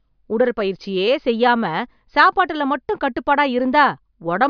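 No technical faults are audible.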